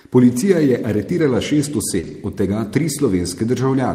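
Right around 1.99 s there's a short concealed packet loss: about 40 ms of the speech never arrived, so the decoder stretched out the last bit of sound to cover the hole before easing back into real audio at 2.05 s. You hear it as a quick smear.

Overlapping that, from 2.03 to 2.13 s, comes a lost packet rebuilt from error correction. Lost audio was replayed from the low-bitrate backup copies carried in the following packets, which fits about three packets going missing. There's no gap, but that 60 ms stretch comes out rougher and noisier.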